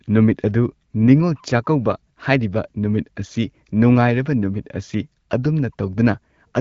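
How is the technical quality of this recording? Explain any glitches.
No glitches to report; the speech carries the light colouring of an AMR wideband (HD Voice) path and stays clear, which fits the 12.65 kbit/s mode.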